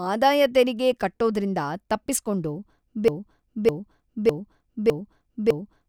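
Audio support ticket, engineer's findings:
Broken-record loop, 3.08 s to end of clip, after "ಆದಾಯ ತೆರಿಗೆ ಕಟ್ಟೋದ್ರಿಂದ ತಪ್ಪಿಸ್ಕೊಂಡು". A 0.61 s speech fragment repeats identically five times, back to back. Likely a player or stream stall re-sending its last held buffer. Intended audio over that span lost.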